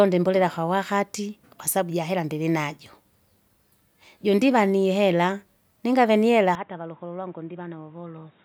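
At 6.55 s, right after "ningavye nihera", the speech abruptly turns dull, loses everything above 3.8 kHz, drops roughly 10 dB and gains new background noise about 30 dB down, with no gap. This likely reflects an input switched to a poorer device.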